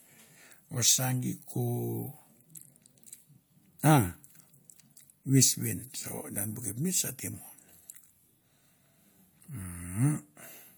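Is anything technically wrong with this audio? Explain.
No, the recording shows no technical faults at any point and needs no repair.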